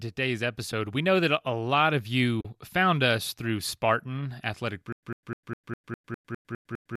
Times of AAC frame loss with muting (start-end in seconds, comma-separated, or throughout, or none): 0.71, 2.40-2.45